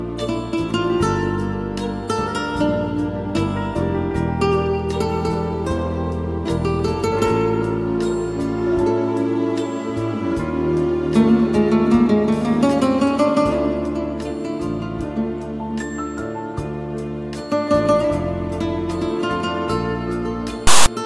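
File tags played as audio, from 20.67 to 20.86 s: a block of text metadata near the end is decoded as if it were sample data, producing a loud, lopsided rasp offset to one side that starts and stops abruptly, lasting about 0.19 s.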